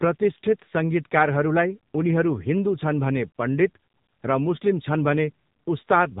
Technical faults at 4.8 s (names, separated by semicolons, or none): AMR narrowband mobile codec